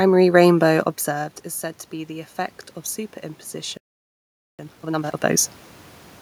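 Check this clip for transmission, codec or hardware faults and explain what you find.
Yes, there are three faults here, all clustered between about 3.5 and 5.6 seconds of this speech clip.

Automatic gain rising, from 3.51 to 5.58 s: the input level fell by about 13 dB, so the automatic gain control slowly wound its gain up by about 7 dB to compensate. You hear the voice and the room noise swell together over roughly two seconds.

Playback stall, from 3.77 to 4.59 s: the audio just cuts to silence mid-flow for about 0.82 s, then carries on. The likely cause is the player running dry of data or having its thread blocked, leaving nothing to output until it recovered.

Time-compressed catch-up, from 4.59 to 5.39 s: right after the stall, the player burns off its backlog by cutting out and cross-fading small slices, playing at 2.0 times speed. The speech comes across rushed but at normal pitch. 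The level change near 5 s, where the talker moves relative to the mic, overlaps the tail of the gain rise.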